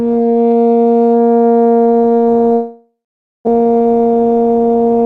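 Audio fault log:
2.53 to 3.49 s, long network dropout: The music breaks off. Its last sound is stretched into a buzz that fades, then 0.49 s of silence follows. It resumes with 0.6 s lost. Incoming audio likely stopped arriving, so the receiver had nothing to play.
3.57 to 5.02 s, jitter buffer speed-up: The music runs at 106% speed with its pitch unchanged, so the tempo sounds hurried and unsteady. After the gap, delay had built up by a few tenths of a second. Tiny pitch-period slices, about a tenth of a second in total, were cut to shrink it.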